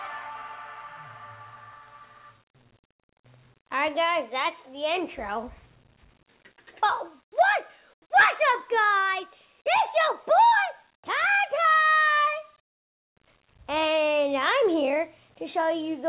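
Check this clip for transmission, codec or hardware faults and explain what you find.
Nothing's wrong here: the audio comes through a normal call path, and the way everything stops at about 4 kHz fits a narrowband, G.711-style telephone codec doing its ordinary job.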